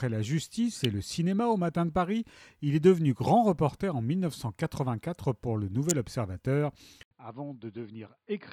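At 0.84 s and again at 5.9 s, a sharp snap sits on top of the sound, an electrical switching spike most likely picked up from a nearby switch or motor arcing. From 7.03 s to the end, after about 80 ms of silence, the input switched to a poorer device, likely a fallback microphone. Nothing remains above 4.8 kHz, and the level drops by roughly 10 dB. A faint new noise floor also appears, which a filter alone wouldn't add.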